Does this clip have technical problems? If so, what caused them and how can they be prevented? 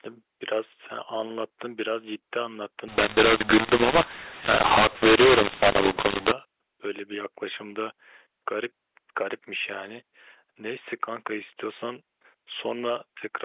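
Yes. From 2.88 to 6.32 s the speech turns harsh and distorted and the pauses fill with hiss. This is a mu-law and A-law mix-up: A-law telephone audio was decoded as mu-law, scrambling levels and lifting the quietest samples above silence. To prevent it, signal the G.711 law explicitly and have every decoder use that law.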